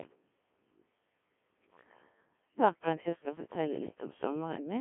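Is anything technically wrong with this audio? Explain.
Yes. A Codec 2 vocoder runs throughout. Only pitch, voicing, energy and a spectral envelope survive, and the decoder rebuilds the speech from sine waves, making it robotic and buzzy. The heavy damage fits a rate near 1.3 kbit/s, in a 200 Hz to 3.4 kHz band with nothing above 3.8 kHz.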